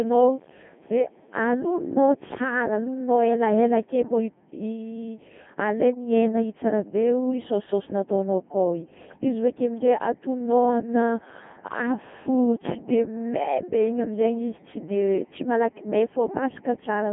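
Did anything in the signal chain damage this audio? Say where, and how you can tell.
Yes, at the codec stage, across the whole speech clip. It has the robotic, buzzy character of the Codec 2 vocoder, and the damage is heavy. Nothing reaches above 3.5 kHz, and the band sits at about 150 Hz to 3.4 kHz, which fits a 2.4 kbit/s mode. The encoder sent only pitch, voicing, energy and a spectral envelope, and the decoder rebuilt the voice from sine waves. Plain telephone band-limiting would sound muffled but natural, not buzzy.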